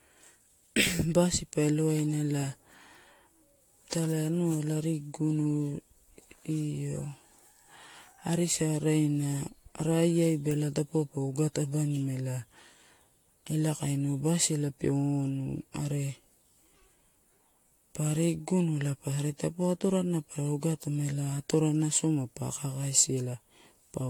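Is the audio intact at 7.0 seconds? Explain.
No. At 7.0 seconds, as throughout the clip, the speech sounds swirly, smeared and hollow, with blurred attacks and nothing above 19.2 kHz. This is likely generation loss from about five rounds of AAC-LC coding near 96 kbit/s, each pass requantising and compounding the noise and spectral holes.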